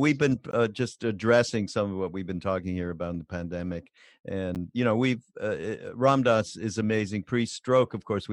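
Two brief hard-edged dropouts cut into this speech clip: a silent hole of about 19 ms at 0.51 s, just before "uh just addressing some", and a shorter one of about 9 ms at 4.55 s, ahead of "you know we've". Both are gaps between stream segments. The 4-second spacing matches the segment length, so at each join the timestamps leave a small hole that the player fills with silence. Nothing is missing from the audio itself.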